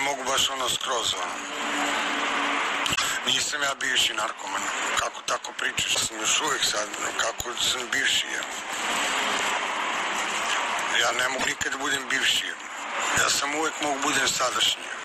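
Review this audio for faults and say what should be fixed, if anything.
Two short glitches, at 2.94 s and 11.38 s, each about 80 ms of garbled chirp or noise where the audio skips ahead. That's likely a broken MP3 bit reservoir: frames got dropped, so the next roughly three 26 ms frames decoded against the wrong bytes. To prevent it, cut or splice MP3s only with frame-aware tools, or work from the uncompressed source.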